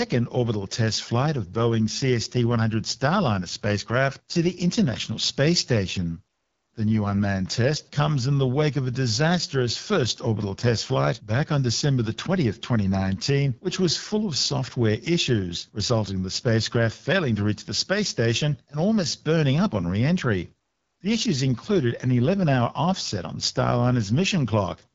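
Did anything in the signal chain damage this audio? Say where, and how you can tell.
Yes: AMR wideband (HD Voice) codec damage throughout this speech, at the codec stage. The rough, raspy texture and nothing above 7.6 kHz point to a low mode, likely 8.85 kbit/s.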